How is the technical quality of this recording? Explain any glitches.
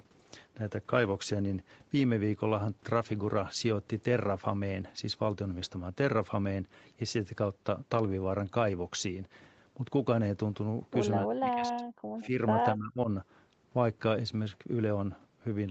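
The recording has a few glitches late on, all typical of a speakerphone call. The audio stops around 8 kHz, which points to a wideband call codec along the lines of Opus at a modest bitrate.

Speech suppressed in double talk happens at 11.26–11.84 s, 12.22–12.39 s and 12.75–13.09 s. The voice ducks by roughly 35 dB, 10 dB and 25 dB. It's likely the echo canceller turning everything down while both ends talked at once.

An echo leak shows up at 12.21–12.26 s as a faint, brief ghost of the voice about 177 ms late, at about 25 dB below the speech. It's likely loudspeaker pickup that the far end's canceller missed and sent back.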